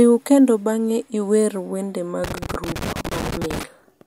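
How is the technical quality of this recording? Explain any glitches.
The speech has one glitch. From 2.24 to 3.63 s there is loose connector crackle. A worn contact makes and breaks, chopping the signal into irregular scratchy bursts.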